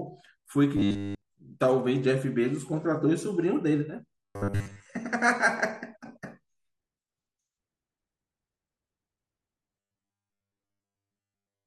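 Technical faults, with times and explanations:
0.77 to 1.22 s, robotic sound from repeated short buffers: the speech becomes a rigid metallic buzz at 100 Hz. This is likely a 10 ms stretch of audio repeated while new audio arrives too slowly.
4.21 to 4.86 s, robotic sound from repeated short buffers: most of this span has the same 100 Hz buzz. The speech still roughly shows through.
9.80 to 11.66 s, robotic sound from repeated short buffers: the buzz returns fully and lasts to the end.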